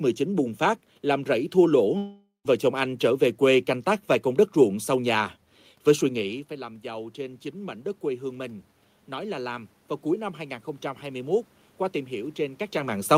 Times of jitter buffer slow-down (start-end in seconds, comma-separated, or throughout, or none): none